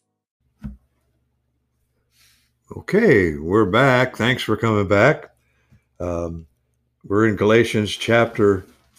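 No technical faults can be heard anywhere in this speech recording. There is nothing in it that needs a timestamp or an account of what went wrong.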